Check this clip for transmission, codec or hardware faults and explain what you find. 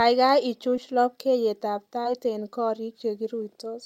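Two transmission faults are present, both short concealed packet loss, at 0.76 s and from 2.03 to 2.05 s. Each time, about 10 ms of speech arrived too late, so the receiver extended the preceding sound for 8 ms and then 13 ms before blending back into the real signal. Each is heard as a brief smear or wobble in the speech.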